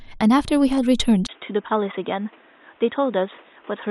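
At 1.27 s, a 20 ms gap, then duller, quieter speech, likely an input switched to a poorer device; the spectrogram empties above 3.8 kHz.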